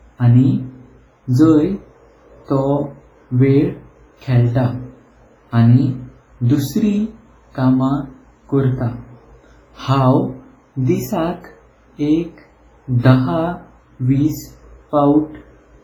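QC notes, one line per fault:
throughout, WMA compression: the speech rings and smears, with a washy hiss that rises and falls with it and faint detail missing. The likely cause is heavy transform coding with long blocks, spreading quantisation noise across tens of milliseconds, which fits a bitrate around 24 kbps.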